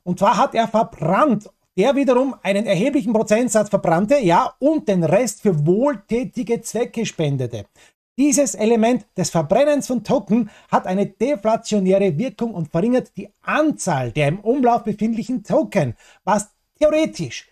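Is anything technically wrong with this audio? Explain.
No, nothing technically wrong is audible here.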